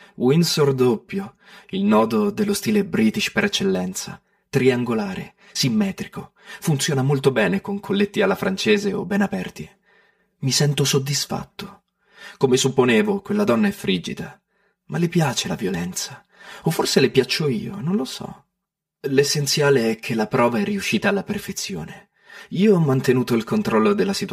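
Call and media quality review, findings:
Channel delay (comb filtering), whole clip: speech sounds hollow and phasey throughout. One channel lags the other by roughly 5 ms before the mono fold-down, so shared content cancels in evenly spaced notches starting near 100 Hz. Check the stereo sum and capture alignment.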